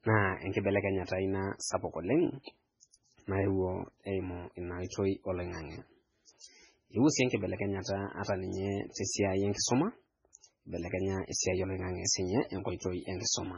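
From start to finish the speech carries heavy coding damage, most likely MP3 compression at a very low bitrate, around 16 kbps. Nothing is heard above 10.3 kHz, and the starved encoder drops weak frequency lines that flicker in and out between frames, giving a watery, swirling texture with metallic chirps on s sounds. That shifting swirl separates it from a simple low-pass filter, which would dull the treble without the warbling.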